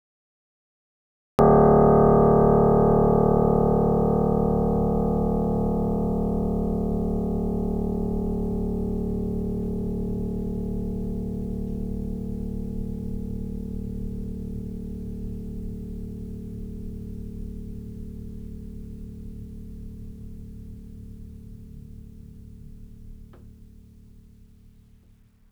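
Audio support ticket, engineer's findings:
Cut-off start: digital silence 0.00–1.39 s, music enters abruptly at 1.39 s mid-sound. No attack, no fade-in. Capture or stream began late, missing the opening.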